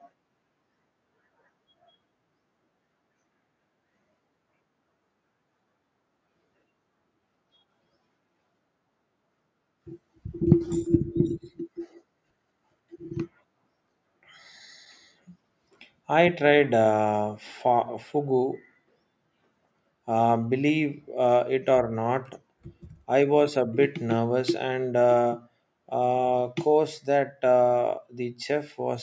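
Speech with no technical faults to report. It has passed through a call's microphone processing, which leaves nothing above 8 kHz and trims away the lowest bass, as that path normally does.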